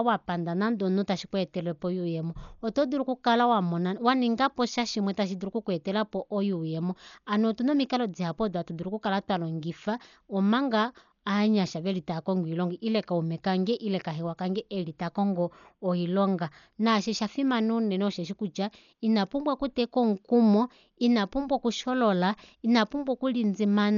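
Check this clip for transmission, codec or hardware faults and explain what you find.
One codec fault runs through the whole recording. Across the entire speech clip, the band stops at 6.9 kHz and the sound is dull and rough, with fluttering noise around tonal parts. This is likely heavy Dolby Digital compression, consistent with a very low bitrate near 48 kbps: the encoder narrows the band and leaves many frequency lines without mantissa bits, so the decoder fills them with dither noise.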